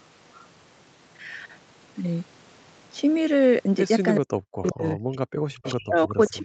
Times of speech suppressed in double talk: 4.20-5.22, 5.49-6.44

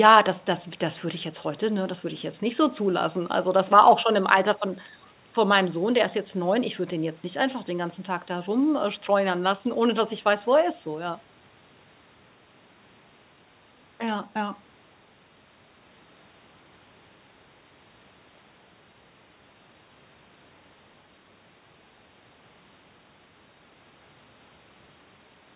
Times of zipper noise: none

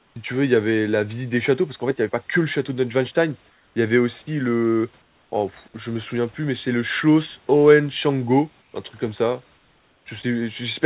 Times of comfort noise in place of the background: 0.00-0.16, 3.50-3.76, 5.02-5.32, 8.62-8.74, 9.56-10.06

